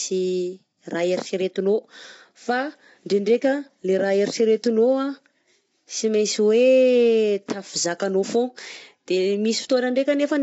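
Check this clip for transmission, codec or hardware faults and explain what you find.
One fault runs through the whole clip. From start to end the speech sounds rough and grainy, with noise between the harmonics and nothing above 7.8 kHz. This is likely low-delay AAC compression (AAC-ELD): short frames resolve pitch harmonics poorly, and the damage fits roughly 24 kbps.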